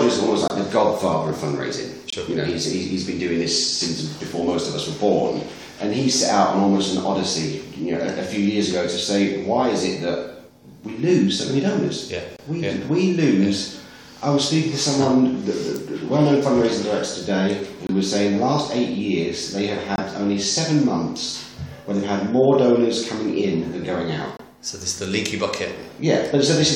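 Damaged compressed frames were rejected by the decoder and replaced with silence, a corrupt frame muted fault: sharp-edged gaps of roughly 35 to 50 ms at 0.48, 2.09, 12.37, 17.87, 19.96 and 24.37 s, each one or two frame lengths, with timing intact.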